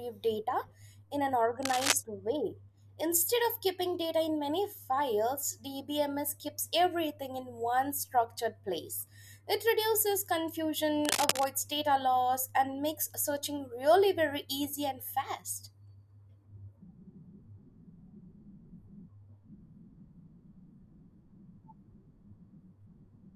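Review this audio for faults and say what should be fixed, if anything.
Cable scratch noise occurs in the speech from 1.63 to 1.93 s and from 11.05 to 11.48 s. It is uneven rustling about as loud as the speech, likely from a worn cable or connector shifting so its contact resistance jumps rapidly. A spectrogram shows ragged broadband vertical streaks, and the waveform shows jagged spikes riding on the signal.

Replacing or reseating the worn cable and fixing it in place so it cannot move during recording would prevent this.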